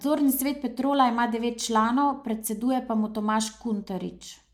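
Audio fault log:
Nothing to log here; the speech comes through without a single technical fault to point at.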